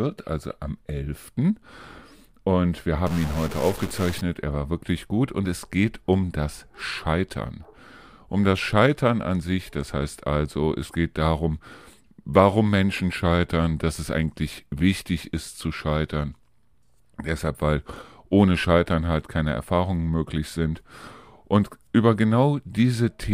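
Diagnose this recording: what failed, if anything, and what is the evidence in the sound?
A stuck bit is heard from 3.07 to 4.21 s as harsh, buzzy distortion riding on the speech, most likely a broken data line or converter fault. One bit stays fixed, so about half the samples jump by a step near -30 dBFS, following the waveform.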